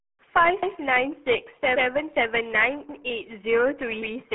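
RealAudio 14.4 codec damage runs through the whole speech clip. It is a heavily compressed dial-up codec, consistent with an 8 kbit/s stream. The band sits at roughly 200 Hz to 3.5 kHz with nothing above 3.8 kHz, leaving the speech muffled and gargly.

Overlapping chunks occur at 0.63–0.76 s, 2.89–3.02 s and 4.02–4.16 s. Each new processing chunk, roughly a second long, begins before the previous one finished, so 132 ms replays at each join and is heard as a brief stutter.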